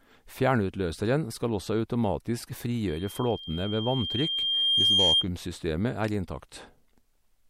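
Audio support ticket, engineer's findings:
Loudspeaker feedback squeal, 2.87 to 5.26 s, over the speech. Single tone near 3.2 kHz swelling for about two seconds, peaking roughly 10 dB above the speech. Mic is picking up its own speaker; loop gain tops one at that frequency.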